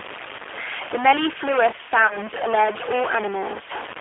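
From start to finish, stuck-bit distortion sits on the speech as grainy noise or buzzy distortion that follows the waveform, and the pauses are filled with a steady noise floor rather than silence. The likely cause is one data bit held at a fixed value by a faulty line or converter, so about half of all samples are pushed off by that bit's weight, and even near-silent samples flip it as their sign changes.

Also throughout, the G.729 codec shapes the sound. The audio is confined to a telephone band of roughly 300 Hz to 3.5 kHz, which fits an 8 kbit/s G.729A stream. The damage is plainly audible. The speech is rebuilt from a vocal-tract filter, a pitch predictor and a handful of pulses per frame instead of the real waveform, so it stays intelligible but comes across rough and slightly synthetic.

At 0.36 to 0.41 s, VoIP packet loss concealed by the speech codec produces a short smeared stretch where about 30 ms of audio went missing, consistent with a single lost packet. 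The decoder filled the gap by extending its last pitch and filter with falling gain. The same happens at 2.07 to 2.18 s, where the weakened, distorted sound lingers for a while after the gap because each rebuilt frame feeds the next.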